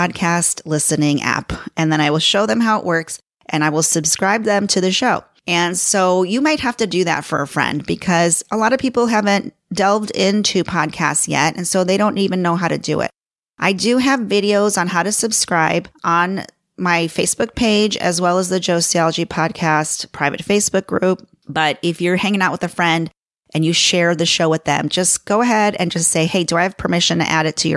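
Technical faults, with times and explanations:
No technical faults can be heard in this recording.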